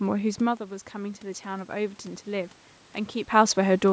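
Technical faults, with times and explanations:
0.37 to 2.58 s, automatic gain rising: The speech drops by about 10 dB as the talker moves back from the microphone. The automatic gain control hears the quieter input and slowly raises its gain by about 4 dB. Voice and room noise swell together.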